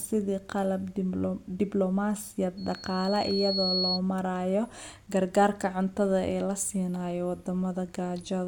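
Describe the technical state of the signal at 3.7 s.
At 3.7 s a piercing single tone near 4.3 kHz sits over the speech, having swelled up over roughly a second to stand about 5 dB above it. This is loudspeaker feedback squeal, running from 2.57 s to 4.0 s and stopping just before "marayo gargaarka cuntada ee". The microphone is picking up its own loudspeaker, and at 4.3 kHz the loop gain exceeds one, so that frequency keeps feeding itself and growing.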